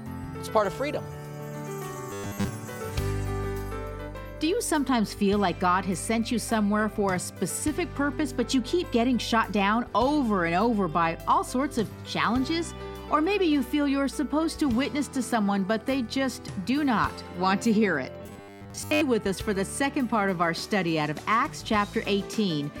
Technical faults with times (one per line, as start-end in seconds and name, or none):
2.11-2.48 robotic sound from repeated short buffers
18.23-19.01 robotic sound from repeated short buffers